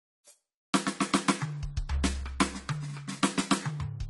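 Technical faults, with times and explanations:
Throughout, AAC compression: the music sounds dull and smeared, with nothing above 11.4 kHz and a warbly, fizzy texture on sustained parts. That is likely a low-bitrate AAC-LC encode, around 32 kbps, cutting the top band and quantising what's left too coarsely.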